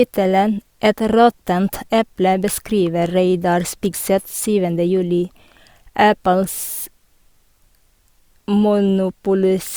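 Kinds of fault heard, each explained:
Nothing stood out on listening to the speech; no audible fault was heard anywhere in the recording.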